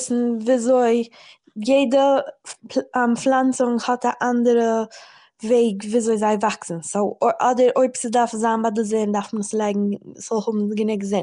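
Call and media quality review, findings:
Likely Nellymoser compression, throughout: 256-sample blocks at two bits a sample, starved bands noise-filled. Speech plainly rough and hissy, smeared, underwater. Nothing above 10.6 kHz. Artefact level fits roughly a 44 kbps stream.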